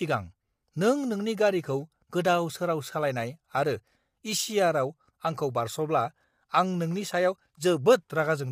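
A speech clip with low-delay AAC compression damage plainly audible throughout: the voice sounds rough and grainy, with noise filling the gaps between harmonics. The likely cause is AAC-ELD at around 32 kbps, whose short frames blur pitch harmonics, unlike the pre-echo smearing of longer-frame codecs.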